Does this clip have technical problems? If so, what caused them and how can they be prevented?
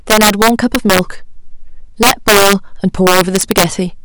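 Yes. The speech has integer overflow in three stretches: 0.10 to 0.99 s, 2.03 to 2.53 s, and 3.07 to 3.64 s. The gain pushes peaks about 7 to 8 dB past the integer limit. Instead of being held at the limit, those peaks wrap around to the opposite sign. Each one jumps across the full range. The result is violent cracks on the loud parts, far harsher than ordinary clipping. Saturating arithmetic or a limiter ahead of the integer conversion would prevent it.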